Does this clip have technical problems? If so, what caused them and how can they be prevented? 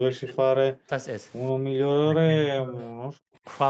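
Yes. The speech sinks sharply, by roughly 20 to 40 dB at its deepest, at 0.0 to 0.47 s, 0.83 to 0.91 s and 2.06 to 2.84 s. This is likely speech suppressed in double talk: the echo canceller ducked the talker while the far side spoke. Headphones, or an echo canceller with better double-talk detection, would prevent it.

The room sound drops out by about 40 dB at 1.53 to 1.78 s and 3.12 to 3.43 s. This is background gated by the echo canceller, which clamped the microphone while the loudspeaker played. Reducing loudspeaker-to-microphone coupling, or making the suppression less aggressive, would prevent it.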